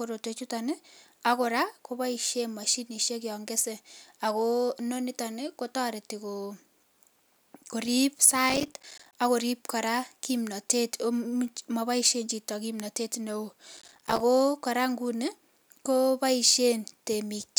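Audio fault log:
8.50–9.16 s and 13.77–14.20 s, processor overload crackle: the speech turns gritty and torn, a dense burst of crackle riding on the sound for under a second each time, then clearing. The processor fell behind on its short audio buffers, a few milliseconds each, and missed dozens of deadlines over a short stretch. Each miss dropped in a tiny gap of silence with abrupt edges, and those rapid cuts fuse into the rough crackling texture.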